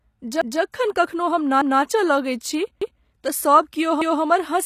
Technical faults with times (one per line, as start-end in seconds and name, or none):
0.00-4.66 HE-AAC compression
0.41-0.61 overlapping chunks
1.61-1.81 overlapping chunks
2.81-3.01 overlapping chunks
4.01-4.21 overlapping chunks